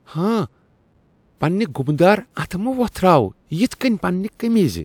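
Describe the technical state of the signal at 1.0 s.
The signal at 1.0 s is intact, with no dropout, clipping, glitch or other audible fault at that moment.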